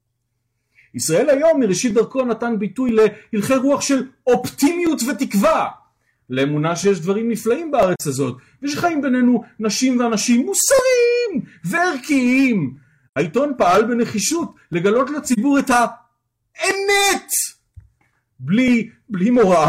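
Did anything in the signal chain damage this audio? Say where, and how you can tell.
Yes. At the driver or buffer stage there is a regular click running from 0.92 s to 19.67 s, repeating every 0.985 s, about twenty in all. The fixed spacing is the tell. It is likely clock drift buffer slips: two devices on separate clocks, off by something like 700 ppm, so the buffer between them drifts until a block of a few dozen samples is dropped or repeated, leaving a small discontinuity each time.

At the codec stage there are three short, soft-edged holes where the sound fades out and back in: 7.96 to 8.01 s (42.7 ms), 13.07 to 13.16 s (85.3 ms), and 15.33 to 15.38 s (42.7 ms). This is AAC frame loss with muting. The decoder zeroed the missing frames' spectra, one frame in the first and third gaps and two in the middle one, and the overlapping transform windows smooth the edges into fades rather than hard cuts.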